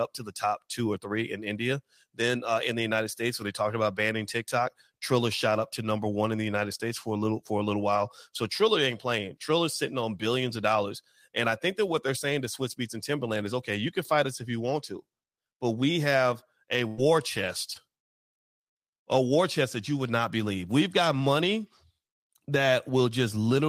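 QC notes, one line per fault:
7.95, 16.98, 17.48 and 17.75 s, lost packet rebuilt from error correction: each of these is a single 20 ms frame that went missing, but the next packet carried a low-bitrate copy of it, and that copy was played instead. There's no gap, just a brief patch that sounds rougher and a bit noisier than the speech around it, because the backup copy is coded much more cheaply.
16.87–17.00 s, burst of packet loss: about 100 ms of speech never arrived in time, several packets in a row. The receiver bridged it by stretching out the last bit of sound it had and letting it fade, so you hear a short held buzz or hiss rather than silence. When the audio picks up again it has jumped ahead, and that tenth of a second is gone. The last frame of the stretch was rebuilt from error correction.
17.74–17.77 s, short concealed packet loss: a single 20 ms chunk was lost, and the decoder papered over it by continuing the preceding sound and blending back into the real audio. 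It comes across as a tiny smear or wobble. The error-correction copy at 17.75 s covered the same spot, so it's part of the same glitch.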